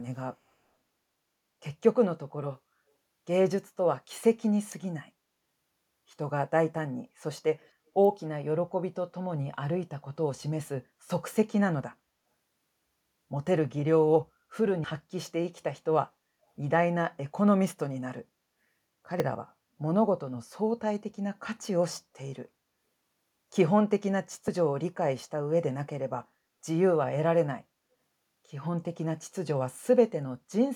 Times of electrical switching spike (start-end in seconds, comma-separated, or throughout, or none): 4.72, 8.05